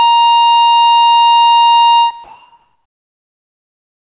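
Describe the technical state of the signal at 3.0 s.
At 3.0 s, from 2.24 s to the end, the background is a flat, featureless hiss about 2 dB off level. This is comfort noise in place of the background, likely from discontinuous transmission.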